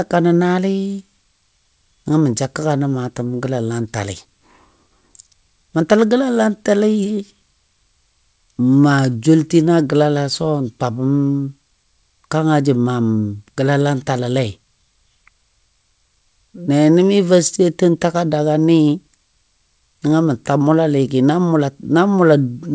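No technical faults can be heard in the speech, which arrives over the WebRTC call path with nothing above 8 kHz, a band limit that fits a wideband codec such as G.722 at 64 kbps.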